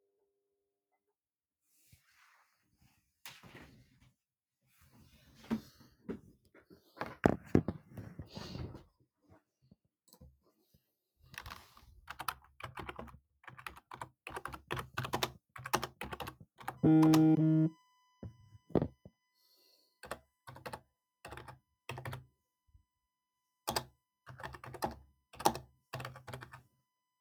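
A recording of everyday sounds with USB whine in its last part. From 16.77 s to the end, a steady tone sits under the audio at 1 kHz. The pitch stays fixed and does not follow the sound. It is quiet, roughly 35 dB below the main audio. The cause is the USB bus drawing current in 1 ms frames. That pulsing leaks into the audio path through shared power or ground.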